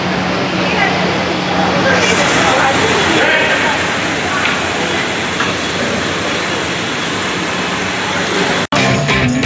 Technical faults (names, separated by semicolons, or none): gain pumping